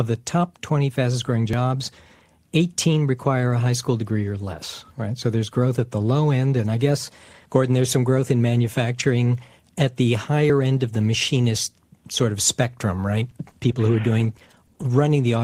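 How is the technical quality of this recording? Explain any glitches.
Two glitches affect the recording, one near the start and a cluster near the end.

Audio missing between chunks, at 1.53 s, just after "fastest growing": a tiny slice of about 10 ms disappears, most likely while a processor working in 3.0 s chunks hands over from one block to the next. The two edges are butted together with no silence, so it comes across as a quick skip.

Scattered short gaps, from 13.13 to 14.82 s, after "machinist sort of spectrum": around seven brief holes, none longer than about 10 ms and 80 ms missing in all, were patched by extending the preceding sound over 220 ms. The result is brief ticks and small smears.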